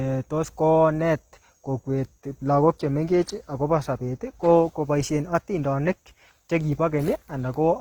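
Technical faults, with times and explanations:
Throughout, Opus compression: the speech sounds grainy and rough, likely from Opus music mode at a rate fitting 16 kbps. The spectrogram shows noise-filled bands with few holes, reaching 20.2 kHz.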